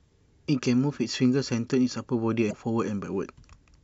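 Part of the compressed stream carrying this speech recording is damaged: a short run of its data was lost or overwritten, so the decoder misreads the affected frames, loses sync and has to hunt for the next valid frame header before normal decoding resumes. For about 60 ms, from 2.47 to 2.53 s, the sound breaks into a brief chirp, squawk, click or short hole. This is damaged data in a compressed stream, not a fault in the recording itself.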